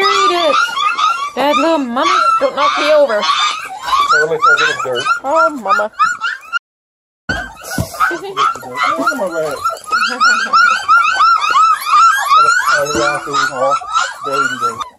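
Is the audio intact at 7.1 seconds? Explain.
No, 7.1 s sits inside an audio dropout to silence from 6.58 to 7.29 s: dead silence, no room tone, likely from the input briefly disconnecting.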